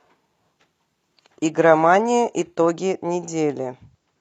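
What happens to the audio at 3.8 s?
Nothing goes wrong at 3.8 s; the speech there is intact.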